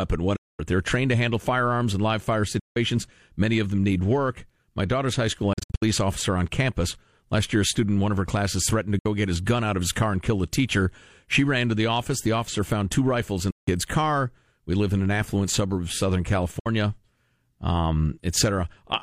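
Six brief silences cut into the speech, at 0.36, 2.59, 5.53, 8.99, 13.51 and 16.59 s. Each lasts about 60 to 220 ms, with abrupt or briefly faded edges. The one at 5.53 s is split into several gaps. Each is likely a Bluetooth dropout. Late packets were discarded, and the speech resumes as if it had played on.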